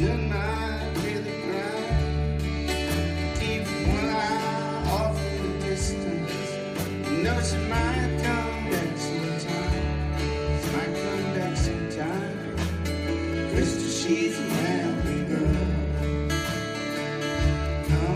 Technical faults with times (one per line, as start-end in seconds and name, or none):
none